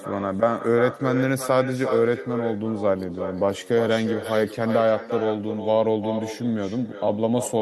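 Speech runs the full clip with echo with no canceller: every phrase returns about 10 dB quieter and thinner, roughly 0.4 s later. Unlike room reverberation, it is a distinct delayed copy from a far-end loudspeaker feeding its microphone back, not a smeared decay.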